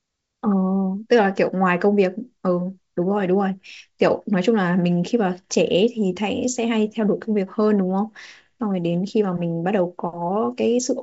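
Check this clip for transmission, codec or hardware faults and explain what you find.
Nothing here needs flagging: the speech arrives over a G.722 wideband telephone link running at 64 kbit/s, which is why there's nothing above 7.7 kHz, and whatever coding wear the link adds at that rate is faint at most.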